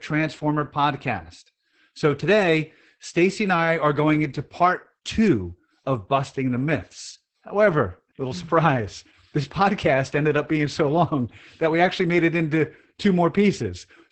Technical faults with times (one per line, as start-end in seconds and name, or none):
0.00-14.12 Opus voice compression